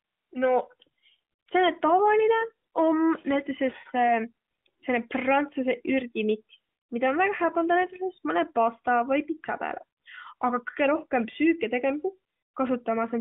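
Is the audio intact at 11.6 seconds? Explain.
Yes, at 11.6 seconds the audio is intact, with the speech passing through the AMR narrowband mobile codec as it normally does.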